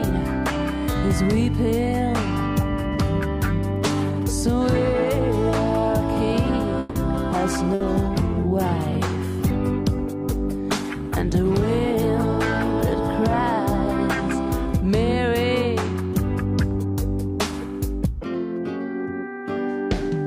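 What you've got here is a call recording that runs into a cluster of trouble just before the seven-second mark and then has a couple more rough patches later on. First, from 6.79 to 6.98 s the sound stalls: the last bit of audio gets stretched into a fading buzz or hiss for about 160 ms, then carries on exactly where it left off. That's a call audio freeze, most likely packets held up in transit so the jitter buffer ran dry. Nothing's actually lost, but the whole stream now sits about 160 ms later than before. Right after, at 7.31 to 7.35 s, there's a skip ahead: playback jumps forward, dropping something like 70 ms of audio, and the two sides are stitched together with barely a gap. That looks like the receiver shedding backed-up audio once the delayed packets showed up, pulling the delay back in by roughly 50 ms. Then from 7.64 s the character of the sound changes and stays that way until 14.88 s. 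It goes coarser and duller, with the top end rolled off, for a good five-plus seconds at its worst. That's a call bitrate drop. The bandwidth estimate fell, and the encoder got squeezed from what sounds like around 128 kbps down to something near 27 kbps, so the codec is quantising harder and trimming high frequencies until the rate climbs back. Inside that stretch, at 7.74 to 7.83 s, there's also a burst of packet loss. About 60 ms is covered by a concealment tail that continues the last sound and fades it out, and when the audio comes back, about 60 ms of real material is simply gone. Finally, from 15.35 to 16.10 s things run slightly fast, about 4% fast at unchanged pitch. That's a jitter buffer speed-up: the buffer was holding more than its target, so it snipped out tiny pitch-period-sized pieces over and over, around 40 ms in total, to catch back up on latency.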